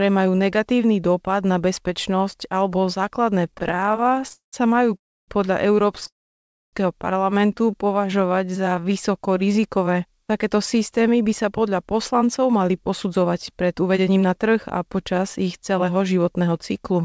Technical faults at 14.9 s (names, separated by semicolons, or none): jitter buffer speed-up